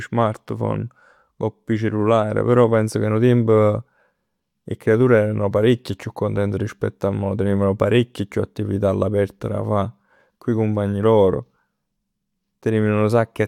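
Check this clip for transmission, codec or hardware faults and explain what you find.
Nothing stood out on listening to this speech recording; no transmission, codec or hardware problem could be heard at any point.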